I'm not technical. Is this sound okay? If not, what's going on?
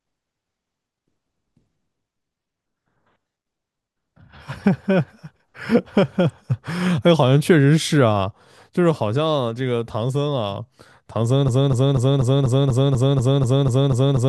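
No. From 11.48 s to the end, the speech turns into a broken-record loop: the same 0.24-second scrap repeats 11 times, back to back, and whatever came next is lost. The likely cause is a player or stream that stalled. Unlike an echo, each repeat is identical and doesn't fade.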